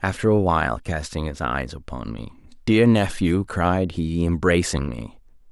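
A short speech recording, with no technical fault to be heard in it. There are no times or causes to give, because nothing in the audio calls for one.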